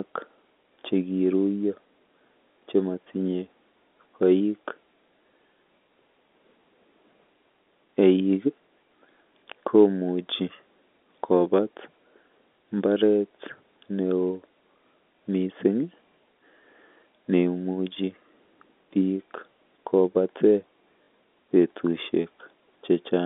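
At 2.52 s and again at 21.04 s, the speech stutters briefly. This is packet loss with the last packet repeated. Each gap lasts 40 ms, which fits two lost 20 ms packets. The receiver replayed old audio, so each run buzzes robotically.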